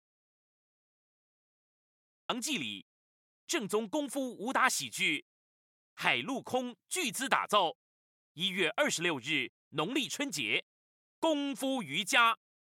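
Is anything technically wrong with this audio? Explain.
Yes. From the start until 2.30 s there is an audio dropout to silence: silence with no room tone, already under way when the clip begins. The likely cause is a lost input, with the recorder writing silence until the signal returns abruptly mid-flow.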